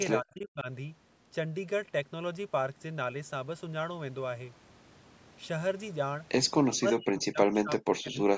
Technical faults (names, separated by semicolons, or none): speech suppressed in double talk